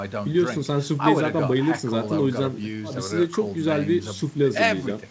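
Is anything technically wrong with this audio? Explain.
No, nothing in this speech clip stands out as a technical fault. It has passed through a WebRTC call path, and the audio stops at 8 kHz, which fits a wideband call codec such as G.722.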